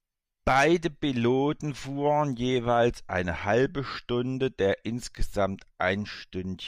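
Nothing stood out on listening to this speech recording.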